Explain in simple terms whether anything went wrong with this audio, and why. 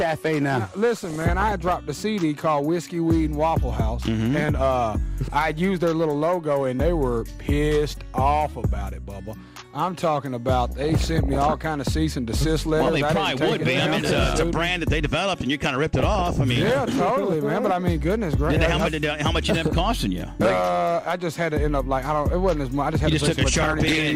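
Four brief bursts of DAB burbling occur, at 0.98–1.78 s, 10.69–11.68 s, 15.94–16.41 s and 23.53–23.96 s. Weak digital radio reception let errors into the audio data, making narrow bands jump in level. The result is short noisy blips over the sound, not a silent dropout.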